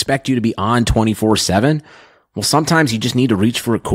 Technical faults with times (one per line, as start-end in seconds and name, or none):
none